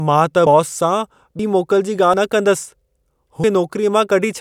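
At 0.46, 1.39 and 2.14 s the speech jumps forward, each time losing roughly a tenth of a second, and at 3.44 s a larger skip of about a third of a second goes by. The likely cause is a dropped buffer (overrun): samples went uncollected before being overwritten, so the audio either side is spliced together. Unlike a dropout, no silent gap appears; the sound simply lurches ahead.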